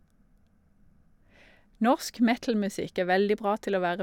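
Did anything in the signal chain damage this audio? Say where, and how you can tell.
No, nothing along the way seems to have left a mark on this one, so there's no stage to point a finger at.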